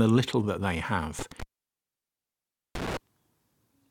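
At 1.19 s, right after "little that they", the speech drops out abruptly with a burst of crackle. The line stays dead apart from a faint hiss, and another crackle marks its return before 2.97 s. This is an intermittent contact: a loose plug or cable briefly lost its connection. The signal path was open for about 1.33 s, so nothing but residual noise got through until the contact closed again.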